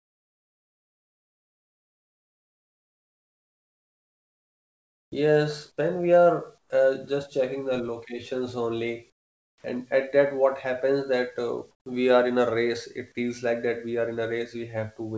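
From 0.0 to 5.12 s the real background gives way to comfort noise: a steady, featureless hiss about 29 dB quieter, likely synthesised by the receiver while the sender paused transmission. Unlike a simple level dip, the noise also turns smoother. At 5.08 to 5.12 s the onset is clipped by the voice detector: about 40 ms of the start is missing, so the sound begins abruptly rather than fading in, with no dropout gap, since the hiss runs right up to it.

From 5.13 to 5.39 s a jitter buffer slow-down plays the audio at about 86% speed, repeating pitch periods to add 43 ms. The pitch stays the same, so it sounds drawn out rather than lowered. From 5.65 to 6.19 s a jitter buffer speed-up runs at about 109%, trimming roughly 50 ms. The pitch is steady but the audio sounds hurried, which is what separates it from a tape-style speed change.

Shorter comfort noise stretches follow at 6.58 to 6.70 s (about 9 dB quieter), 9.10 to 9.64 s (about 12 dB quieter) and 11.71 to 11.86 s (about 9 dB quieter), each a flat hiss in place of the textured background. 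The onset at 9.61 to 9.64 s is clipped again, losing 30 ms and starting hard. Throughout, nothing is heard above 8 kHz, consistent with a wideband call codec such as G.722.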